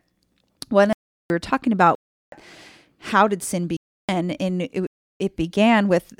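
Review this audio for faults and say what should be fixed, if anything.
The speech drops out four times as blocks of digital silence: 0.93 to 1.30 s, 1.95 to 2.32 s, 3.77 to 4.09 s and 4.87 to 5.20 s. The first ends just before "were talking about". The second starts right after it. The third follows "how did sin". The first two last 0.37 s each, which fits a 16384-sample buffer that was never filled. The other two last about 0.32 and 0.33 s. Each cut is abrupt. To fix this, give the audio process enough buffering headroom that it always delivers samples before the output deadline.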